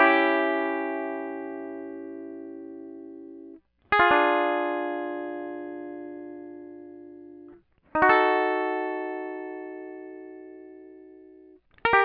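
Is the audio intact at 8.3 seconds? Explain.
Yes, the music plays through 8.3 seconds intact, with no dropout, click or other fault at that moment.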